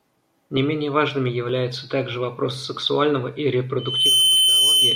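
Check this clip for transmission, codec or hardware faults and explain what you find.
Loudspeaker feedback squeal, 3.78–4.95 s: the microphone re-amplifies its own loudspeaker, so a 3.1 kHz tone swells within a third of a second over the speech.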